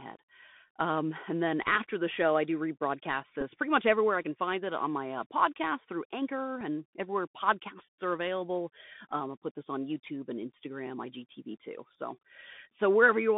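From start to finish the speech is carried through the Bluetooth CVSD headset codec. The line sits in a narrow band of roughly 150 Hz to 3.6 kHz, so everything above that is simply gone. The codec damage is plainly audible: a grainy hiss rides under the speech, and the s sounds come out scratchy where the one-bit up/down steps can't keep pace with fast high content. It's what you'd expect from a 64 kbit/s CVSD link.

The first Bluetooth headset packet repeat lands at 3.41 to 3.43 s, right after "show I do rebroadcast" and before "pretty much everywhere I". About 11 ms of audio dropped out, which fits roughly three lost packets. The chip filled the gap by decoding the previous packet again, so you get a quick buzzy blip, the same 3.75 ms slice replayed back to back, before clean audio picks up again.

The second repeat, at 6.61 s just before "everywhere podcasts are available", is shorter. 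Only about 4 ms went missing, one packet's worth, so the single replay shows up as a small tick rather than a buzz.

The third, at 9.11 s just after "everywhere podcasts are available", looks like the first. Around 11 ms was lost, likely three packets, and the repeated packet gives another brief buzzy burst.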